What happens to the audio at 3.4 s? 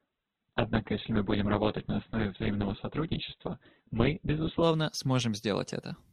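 At 3.4 s the player is still on the opening low-bitrate version of an adaptive stream, which it chose to start quickly before measuring the connection. From 0 s to 4.63 s the speech is band-limited, with nothing above 4.2 kHz, and has stronger codec artefacts, which points to a very low rate around 8 kbit/s. At 4.63 s it steps up to a better version, around 64 kbit/s, and the treble returns abruptly without any gap.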